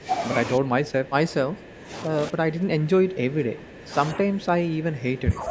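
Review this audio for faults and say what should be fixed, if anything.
The speech dips in level in four places: briefly at 0.0–0.1 s, then 0.57–1.92 s, 2.08–3.93 s and 4.17–5.5 s. It drops by about 10 dB, and by about 15 dB in the third stretch. The likely cause is speech suppressed in double talk. While the far side was talking, the echo canceller could not tell the near talker from loudspeaker echo, so it turned both down. On a waveform the envelope visibly shrinks across those blocks, with recovered level in the short gaps between them. A spectrogram shows the same regions fading across the band up to the 8 kHz ceiling of the call processing. To prevent it, use a double-talk detector that holds off suppression whenever near-end energy clearly exceeds the predicted echo.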